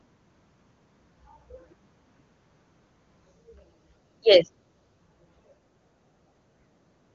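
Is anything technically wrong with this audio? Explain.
No, nothing in this speech clip points to a technical fault. It has the bandwidth of AMR wideband (HD Voice) coding, reaching to about 7 kHz, with any coding damage faint at most, which fits the codec's top 23.85 kbit/s mode.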